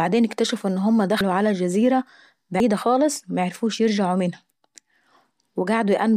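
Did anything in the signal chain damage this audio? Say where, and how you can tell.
Yes, at the driver or buffer stage. At 1.21 s and again at 2.60 s the speech jumps forward. There's no gap, just an abrupt splice where roughly a tenth of a second of sound has gone missing. That pattern is most likely a dropped buffer (overrun): the capture software didn't collect its block in time, the hardware wrote over it, and the audio on either side got butted together.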